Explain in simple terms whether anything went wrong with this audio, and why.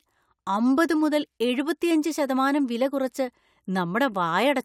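Nothing went wrong here: the speech runs without any audible dropouts, glitches, distortion or interruptions, so there is no fault to report.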